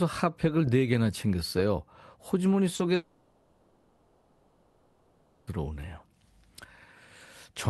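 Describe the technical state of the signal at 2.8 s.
A brief smear or wobble in the speech around 2.75 to 2.81 s marks short concealed packet loss: about 40 ms of audio arrived too late to decode, so the receiver extended the preceding sound to bridge the gap, then blended back into the real signal.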